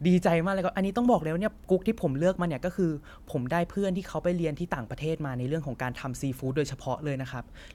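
Listening to this speech recording, nothing stood out as a technical problem at any point.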